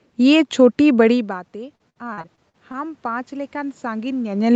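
From 1.1 s to 4.47 s the automatic gain control, responding to an input that fell by about 19 dB as the talker moved back around 1.0 s, rises gradually by about 7 dB, so the speech and the room noise behind it swell together.

Between 1.75 s and 2.75 s, repeated packet loss leaves seven holes, the longest 59 ms. Each is patched by stretching the preceding sound, about a quarter of that second in all, giving choppy, robotic speech with fragments missing.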